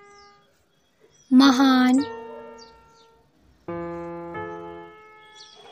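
Nothing in the audio stood out as a technical problem on listening.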